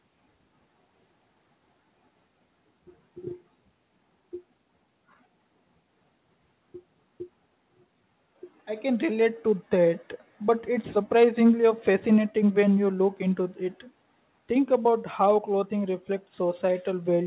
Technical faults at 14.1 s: none

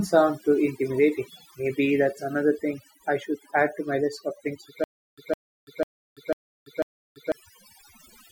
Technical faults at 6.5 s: overdone noise removal; stutter with silent gaps

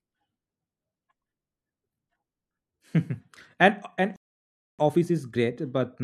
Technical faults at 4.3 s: playback stall

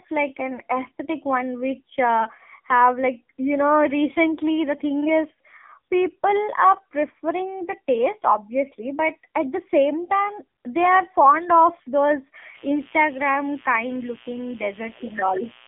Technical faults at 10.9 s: AMR narrowband mobile codec

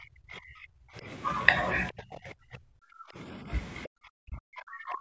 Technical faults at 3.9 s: other side's voice leaking through; speech suppressed in double talk

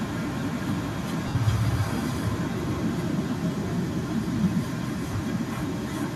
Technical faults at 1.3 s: echo with no canceller; lost LE Audio frames

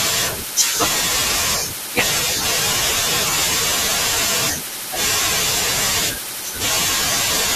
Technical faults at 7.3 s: compressed frames skipped

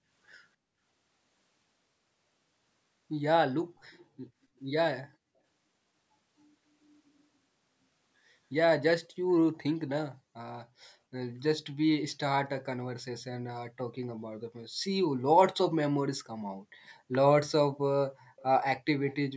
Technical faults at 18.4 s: echo leak

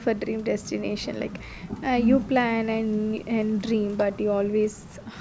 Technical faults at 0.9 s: none

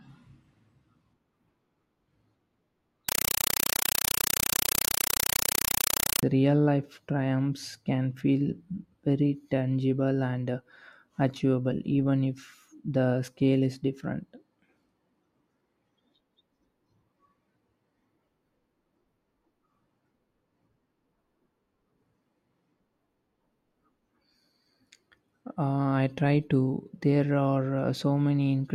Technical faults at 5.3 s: compressed stream played as audio

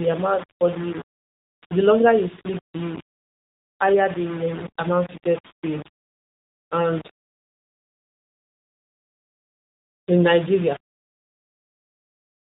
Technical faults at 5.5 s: low bit depth without dither; AMR narrowband mobile codec; lost AMR speech frames

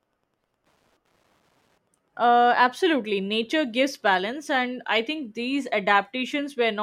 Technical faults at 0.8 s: Wi-Fi interference

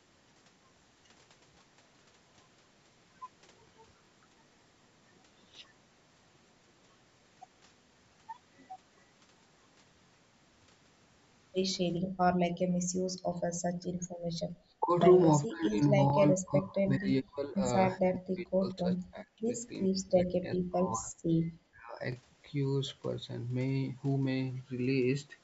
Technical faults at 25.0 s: none

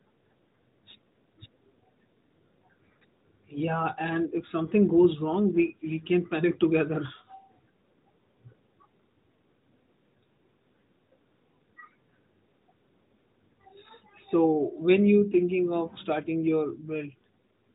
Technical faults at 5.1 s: none

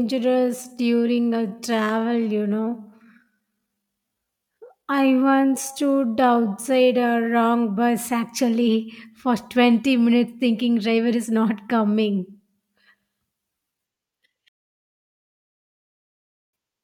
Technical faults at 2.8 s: time-stretched section

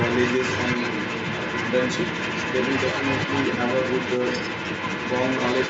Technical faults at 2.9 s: other side's voice leaking through

